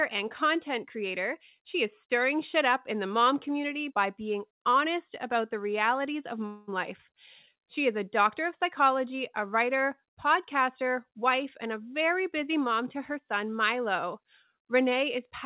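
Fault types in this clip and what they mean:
Long network dropout: From 6.46 to 6.69 s the audio stops arriving, likely because of a network gap, and about 0.22 s of material is lost. The receiver fills roughly 0.21 s of it by stretching the last sound into a fading buzz, with no true silence, before the signal resumes partway on. A waveform shows a decaying smeared segment, and a spectrogram shows blurred, repeating bands, all capped at the call path's 4 kHz ceiling.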